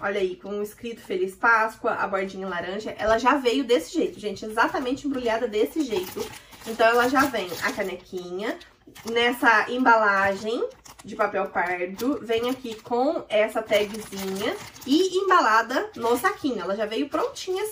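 Nothing is technically wrong with the audio, so there are no times or causes to report.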